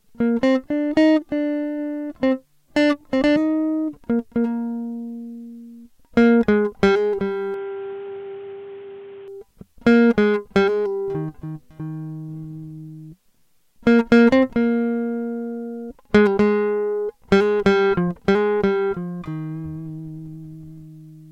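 From 7.54 to 9.28 s the music goes dull and boxy, nothing above 3.8 kHz, a few dB quieter with added background noise, likely the input switched to a poorer device.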